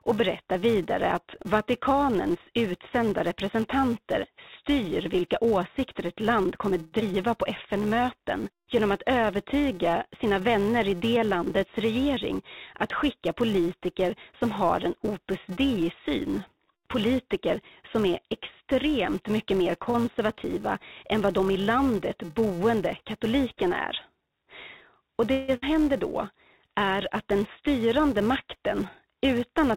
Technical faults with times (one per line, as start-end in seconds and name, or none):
0.00-29.77 filter restarted on every block
6.82-6.94 call audio freeze
7.00-7.03 skip ahead
11.78-12.40 jitter buffer speed-up
19.84-19.88 short stall from a late packet
19.90-19.96 short concealed packet loss
25.32-25.50 call audio freeze
25.56-25.64 skip ahead